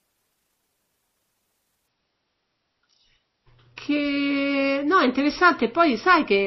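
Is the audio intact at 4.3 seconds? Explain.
No. At 4.3 s you're inside an adaptive stream at a lower bitrate stretch, running from 1.88 s to the end. The stream abruptly switched to a lower-quality version with no gap, which sounds like a drop from roughly 128 to 24 kbit/s MP3. The speech loses everything above about 5.8 kHz and turns dull and smeary.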